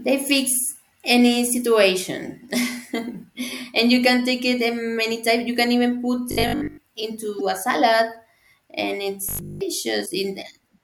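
From 6.32 to 6.80 s, and again from 9.29 to 9.61 s, the speech turns into a rigid metallic buzz at 50 Hz. This is robotic sound from repeated short buffers. The likely cause is audio arriving too slowly, so a 20 ms stretch is looped in place of the real audio. In the first passage most of the sound is replaced this way, and in the second all of it is. A fixed pitch that persists for hundreds of milliseconds sets this apart from a one-off glitch.

At 7.38 s and 10.05 s there are brief corrupt blips of about 30 ms, roughly one 26.1 ms MP3 frame. These point to a broken MP3 bit reservoir, likely dropped frames that leave the next frame decoding from borrowed bytes that no longer match. Each sounds like a short chirp, burst of noise or hole that jumps ahead, with no sustained tone.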